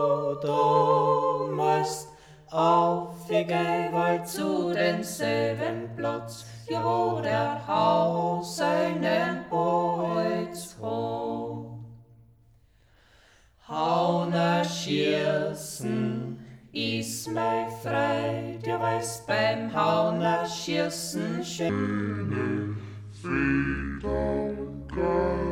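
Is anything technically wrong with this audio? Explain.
Yes. From 21.69 s to 25.52 s, the last section plays at the wrong speed, 0.604 times normal. The likely cause is an editor or player running this portion against a mismatched clock. Timing and pitch shift together, so the sound drags slowly and drops roughly ten semitones, turning deep and sluggish.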